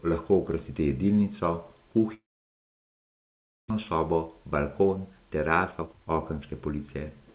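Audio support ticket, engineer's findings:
Likely long network dropout, 2.14–3.72 s: packets stop arriving, receiver stretches last sound into brief fading buzz, then near-silence for about 1.5 s; roughly a second of speech lost, playback resumes later. G.711-style band limit, nothing above 4 kHz.

Jitter buffer speed-up, 3.97–7.34 s: backlog after the gap (roughly half a second extra delay) drained by cutting short pitch-period chunks repeatedly. Speech runs about 115% speed, pitch unchanged, sounds hurried.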